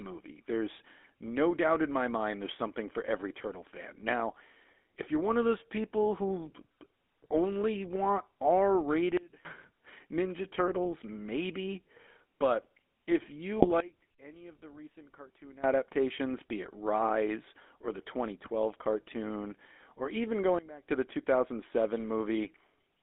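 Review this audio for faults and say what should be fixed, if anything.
The GSM full-rate codec colours the whole speech recording with a buzzy, gravelly roughness, and the band is confined to roughly 250 Hz to 3.5 kHz. That fits a 13 kbps GSM stream. Unlike plain band-limiting, the grit comes from pulse-driven excitation resynthesis. Prevention: carry the call over a wideband codec such as AMR-WB or Opus.

GSM bit errors occur from 13.58 to 13.68 s as a short squawking, gargling burst. Corrupted filter, pitch and gain parameters distort a handful of frames. Unlike a packet dropout, the sound warps rather than going silent. Prevention: improve the radio link or add stronger channel coding.

Sudden gain jumps occur at 9.17–9.45 s (about 24 dB down), 13.80–15.64 s and 20.59–20.89 s (each about 19 dB down). Speech and background noise drop together at an abrupt edge, most likely from a gain setting applied without a ramp. 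A fade would be gradual instead. Prevention: smooth every gain change with a short ramp.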